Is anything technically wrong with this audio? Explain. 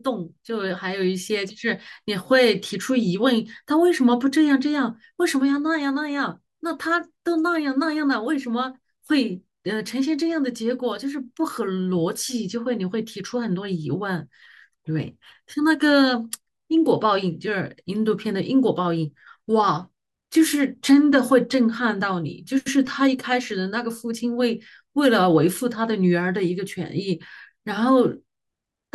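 No, nothing technically wrong turns up anywhere in this speech recording.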